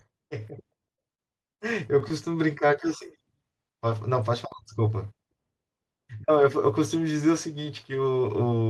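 Between 0.95 and 2.28 s the speech hits repeated stalls, a stutter of nine brief hiccups. Packets arrived late, the jitter buffer kept running dry, and each gap was patched by extending the last sound, up to 43 ms at a time. Nothing's lost, but it drags and catches.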